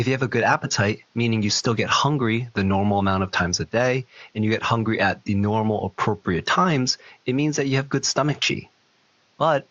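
There are no technical faults to describe in this speech; the faint room noise, about 41 dB below the speech, belongs to the recording itself.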